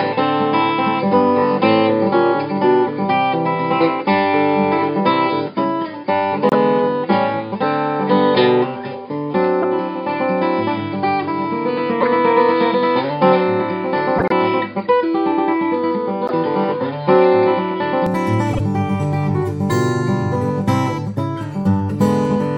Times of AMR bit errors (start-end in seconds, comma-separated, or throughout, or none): none